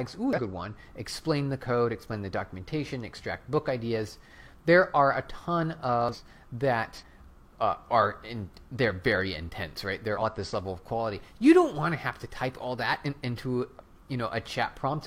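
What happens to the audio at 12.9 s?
Nothing goes wrong at 12.9 s; the audio plays through that moment intact, with no dropout, click, distortion or other audible fault.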